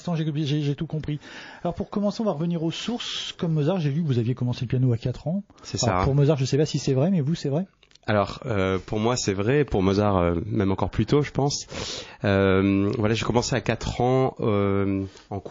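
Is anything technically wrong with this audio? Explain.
Yes. Throughout the audio there is plainly audible codec damage. The sound has a watery, swirling texture with metallic chirps on bright transients, and attacks are smeared. This is likely MP3 compression at a very low bitrate, one that fits about 32 kbps. Short of bits, the encoder zeroes weak spectral lines, which then flicker on and off between frames.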